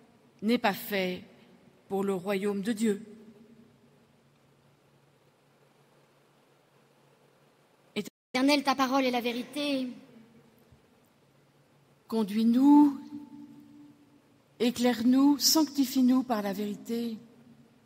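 At 8.07 s the sound cuts to silence for about 260 ms, a playback stall, likely the player running dry, then resumes. From 8.35 to 10.09 s, catch-up at higher speed plays at 1.15 times normal, raising pitch by roughly two semitones together, unlike a pitch-only shift, before dropping back.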